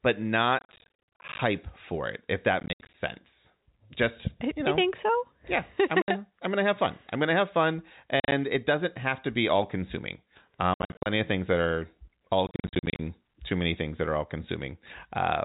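Speech over a narrowband telephone path with G.711 coding is chopped by bursts of hard-edged dropouts at 0.59–1.39 s, 2.6–2.94 s, 6.02–6.08 s (after "think so yeah I'm"), 8.2–8.32 s, 10.74–11.06 s and 12.47–12.99 s. This is packet loss filled with silence: lost packets, their length fitting 10 ms each, were replaced with digital silence, leaving gaps up to 70 ms long.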